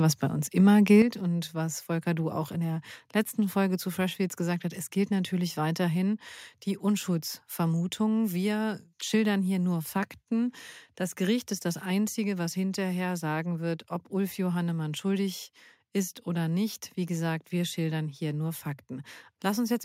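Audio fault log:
1.02 s, microphone volume stepped down: speech and background drop about 7 dB at once and stay lower, likely the call software cutting the input gain in one step.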